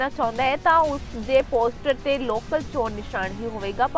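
From 0.55 to 2.85 s the resampler restarted on every block, converting each 50 ms block in isolation, which fits a 44.1 kHz to 16 kHz conversion. Each block edge misses its true neighbouring samples, leaving a small error there, heard as ticking at 20 Hz.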